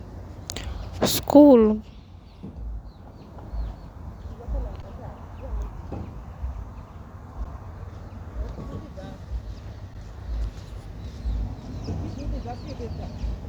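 Underrun with held sample at 4.82, 7.44 and 9.94 s: each time the output buffer ran dry for about 11.6 ms, which fits a 512-sample buffer, and the converter held its last value. The speech briefly freezes flat, then resumes where it stopped with only a soft edge.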